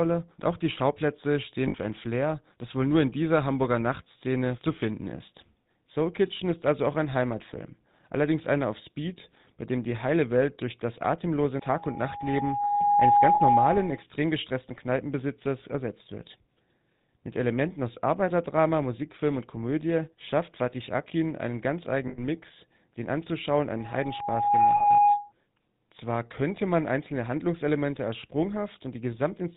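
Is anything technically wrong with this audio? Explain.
Yes, there are three kinds of problem here.

Throughout the clip the speech has the GSM full-rate codec sound, which points to the 13 kbps full-rate coder. It models the vocal tract and excites it with a sparse, regularly spaced pulse train, keeping only every third excitation sample, and it cuts everything above 4 kHz. The result is plainly audible: a dull, band-limited voice with a buzzy, gravelly roughness over all of it.

There are lost GSM frames at four points: 1.68 to 1.75 s, just before "für ein" (60 ms); 13.34 to 13.41 s (60 ms); 22.08 to 22.20 s, right after "einen ganz" (100 ms); and 24.76 to 24.84 s (40 ms). In each gap the decoder reuses the last good frame's parameters, so instead of a clean dropout you hear a short, rough, metallic ringing smear.

From 11.61 to 14.03 s, right after "durch das atemlose", there's a loudspeaker feedback squeal. 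The mic is picking up its own speaker, and at 821 Hz the loop gain went above one, so that tone feeds on itself. It swells over about a second and a half into a steady whistle that ends up well above the speech. The 13.34 s frame loss falls inside it.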